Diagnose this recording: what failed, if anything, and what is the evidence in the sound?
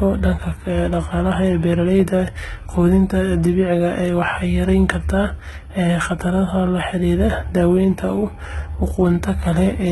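The failure sits at the codec stage, throughout the speech. Nothing is present above 11.8 kHz, and the treble below that cut-off sounds synthetic rather than recorded. The s sounds come out gritty and lispy, with a metallic edge. This points to heavy HE-AAC compression, likely at a bitrate around 16 kbps. The encoder keeps only the lower spectrum and rebuilds the top by copying lower bands upward, so the rebuilt harmonics no longer match the real ones.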